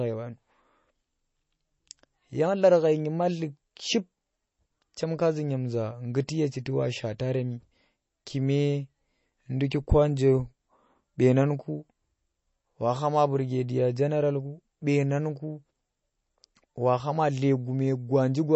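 Throughout the recording, the speech has most likely been through MP3 compression at a very low data rate, which fits a bitrate of around 32 kbps. Short of bits, the encoder has cut off the treble, leaving nothing above 7.9 kHz, and has thrown away weaker frequency detail that flickers in and out between frames. The damage is plainly audible: a dull, band-limited tone with a watery, swirling texture and metallic chirps on s sounds.

At 9.70 s there is pre-echo, a side effect of the same transform coding. A sharp attack falls late in a coding block, and the quantisation noise sized for that loud moment is spread back across the quiet stretch just before it. It is heard as a brief smear of hiss, about 10 ms long, leading into the onset, which then sounds softened rather than crisp.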